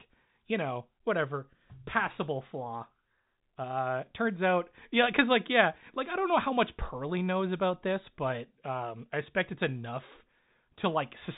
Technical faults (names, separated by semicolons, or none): none